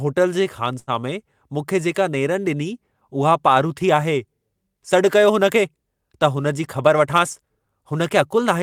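At 0.79 s the speech briefly turns into a held, fading continuation of the last sound for roughly 80 ms before picking up again at 0.90 s with about 80 ms of audio skipped. This is a burst of packet loss: consecutive packets were lost or arrived too late, so the receiver stretched and faded the last sound.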